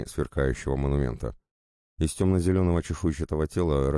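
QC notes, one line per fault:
No fault found, so there is nothing to note for QC.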